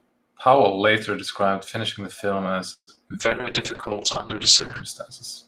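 Just after "described finishing the film", at 2.73 s, the sound stops and is carried on by a fading buzz for roughly the first 0.07 s, then 0.07 s of silence, until 2.89 s. This is a call audio freeze, likely caused by packets being held up until the jitter buffer ran dry. Unlike packet loss, nothing is thrown away. The audio picks up exactly where it halted, so the 137 ms pause is inserted into the stream and everything after it arrives that much later.

Two short concealed packet losses follow. From 2.95 to 2.99 s, about 20 ms of audio never arrived. The receiver patched the hole by extending the preceding sound, which comes across as a brief smear. At 3.09 to 3.12 s, about 40 ms is missing and only a short fill covers it, giving a quick wobble. That jump also takes back roughly 30 ms of the delay added by the freeze. What sets these apart from the freeze is that real material is lost rather than postponed.

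From 3.22 to 4.90 s a call bitrate drop takes hold. The encoder is pushed from 32 kbps down to 7 kbps and stays near that floor for about 1.6 s. At that rate Opus codes the sound coarsely and trims the upper frequencies, so the audio turns muffled and watery. There is no gap or glitch here. The change is a sustained loss of quality that persists until the rate recovers.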